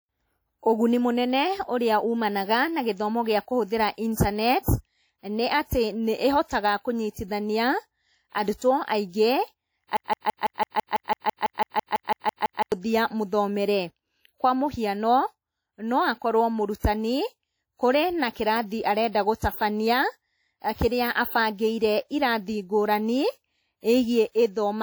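Speech runs throughout with plainly audible codec damage, most likely WMA compression, which fits a bitrate around 48 kbps. The long transform blocks smear quantisation noise over tens of milliseconds, so consonants ring and the background hiss swells and breathes with the speech. Unlike a low-bitrate MP3, the band isn't cut short: content reaches about 20.1 kHz, and the damage shows as washy ringing rather than a dull top. From 9.97 to 12.72 s there is a broken-record loop, likely caused by a stalled player or stream that kept sending its last buffered fragment. A 166 ms slice repeats exactly, back to back, about 17 times, and the speech that should have filled those 2.75 s is lost. Unlike a stutter or dropout, there is no gap or silence: each pass is an identical copy, giving a steady mechanical rhythm at about six repeats per second.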